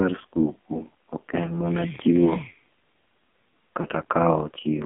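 It's a speech clip squeezed through the AMR narrowband mobile codec: the band sits at roughly 200 Hz to 3.5 kHz with nothing above, and the voice has a heavy buzzy, synthetic edge, which fits one of the low AMR modes at about 5.9 kbps. There are also two lost AMR speech frames. The first is at 1.46 to 1.52 s, between "skuku ok" and "mana chiwo", and the second is at 3.82 to 3.86 s. Each one is a short dip or warble where the decoder patched over a single missing 20 ms frame by repeating its last settings at lower gain.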